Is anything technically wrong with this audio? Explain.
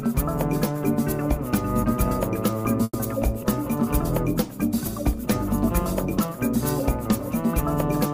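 Yes. From 2.83 to 2.96 s there is a call audio freeze. The sound stalls, and the receiver stretches the last sound into a decaying buzz or hiss for about 110 ms. This tail then drops to silence for about 30 ms before the audio picks up exactly where it left off. The likely cause is packets delayed in transit, draining the jitter buffer. Nothing is lost. A gap is inserted instead, leaving everything after it about 110 ms later than before.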